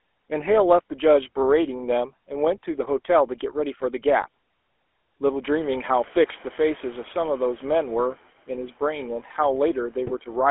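GSM full-rate codec, throughout the speech: the voice is rebuilt from a vocal-tract model driven by a coarse, regularly spaced pulse excitation, and that thinned-out drive gives it a plainly audible buzzy, gravelly edge. Its harsh texture fits the 13 kbps full-rate coder. The band is held to a telephone line's 300 Hz to 3.4 kHz, so the sound is thin and boxy. The room noise that comes up around 5.5 s passes through the same narrow, rough coding.

GSM bit errors, from 10.07 to 10.12 s: near the very end, corrupted bits reach the decoder and scramble the filter, pitch and gain values it relies on. For roughly 60 ms the spectrum twists and the level jumps, so the speech breaks into a brief squawk and gargling pop. The short span points to about three damaged frames, consistent with an error rate near 3 percent on a weak link.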